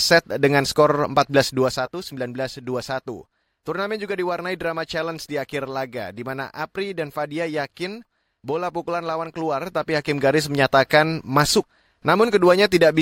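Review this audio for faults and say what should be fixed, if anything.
Zipper noise runs from 1.42 to 1.88 s, just after "dengan skor", while the speech level drops by about 10 dB. Instead of gliding, the gain moves in discrete jumps, around 50 per second, with no interpolation between them. Each jump puts a small discontinuity in the waveform, so a fast ticking or zipping sits on top of the speech for the length of the fade. To prevent it, ramp the gain per sample or smooth the control value before applying it.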